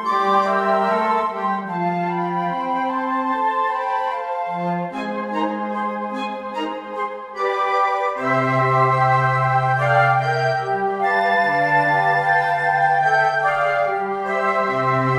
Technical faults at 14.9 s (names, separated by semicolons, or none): none